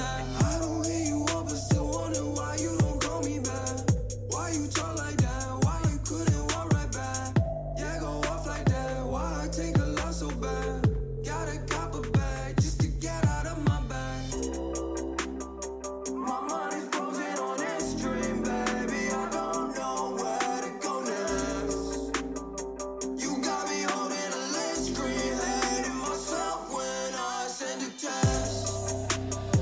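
No technical faults can be heard anywhere in the audio. It has passed through a call's microphone processing, which trims the lowest bass and leaves nothing above 8 kHz, as that path normally does.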